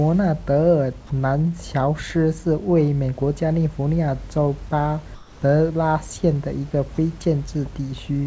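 At 5.15 s the speech breaks off for 270 ms, until 5.42 s, and about 110 ms of it is simply gone, replaced by a soft, even hiss. This is sound dropped by the voice detector, likely because the sender judged a quiet stretch to be background and stopped transmitting, so the receiver filled the gap with comfort noise. A shorter 30 ms dropout follows at 6.95 to 6.98 s, costing about 20 ms of speech. On a waveform, each gap shows as a sudden fall to a low, steady floor. On a spectrogram, the speech structure gives way to a flat, featureless band that stops at 8 kHz, matching the call codec's bandwidth. The room noise, about 30 dB below the speech, sits in that same region.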